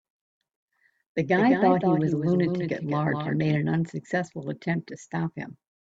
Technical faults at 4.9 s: none

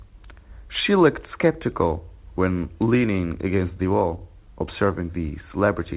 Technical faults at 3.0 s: none

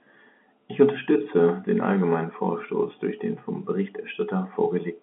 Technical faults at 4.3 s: none

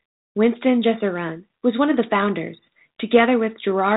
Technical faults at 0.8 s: none

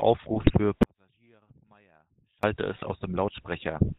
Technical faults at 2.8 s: GSM full-rate codec; GSM bit errors

